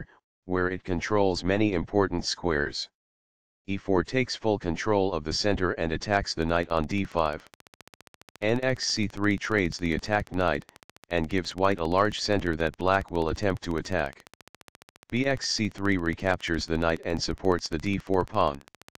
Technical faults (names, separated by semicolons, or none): train of clicks